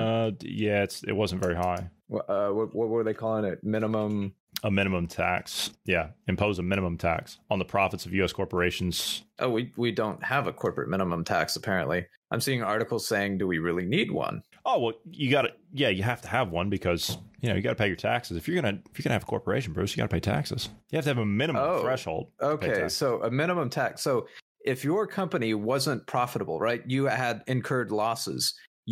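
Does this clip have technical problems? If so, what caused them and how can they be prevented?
No, the speech signal holds steady throughout, with no audible technical problems, so nothing needs preventing.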